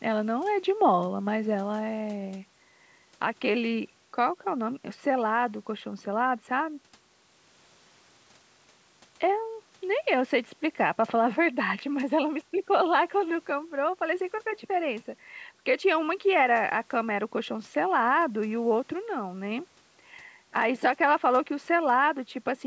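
Speech, with no technical faults audible anywhere in the clip. It has passed through a call's microphone processing, which leaves nothing above 8 kHz and trims the lowest bass, as that path normally does.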